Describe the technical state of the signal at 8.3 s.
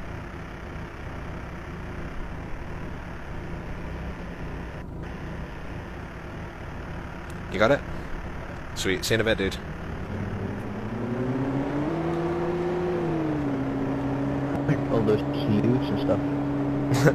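Around 8.22 to 8.27 s the audio jumps abruptly forward, losing roughly half a second of material. This is compressed frames skipped: a run of about ten whole frames never reached the output, either missing from the file or rejected by the decoder as damaged. The skipped span fits frames of about 46 ms.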